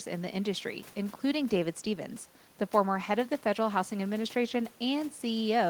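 No technical faults can be heard in the signal, and the only thing beneath the speech is the room's own background noise, sitting about 29 dB lower.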